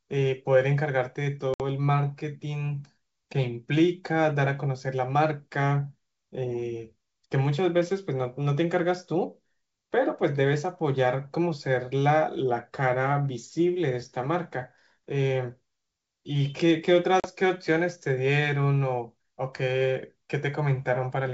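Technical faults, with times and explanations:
1.54–1.61 s and 17.20–17.27 s, packet loss on an ADPCM call: the speech drops into hard-edged silence, about 60 ms for a few packets and then 40 ms for a couple. When it returns, the decoder's predictor and step size no longer match the sender's, so the speech comes back slightly distorted before it settles. The G.722 wideband coding stays clear around both dropouts.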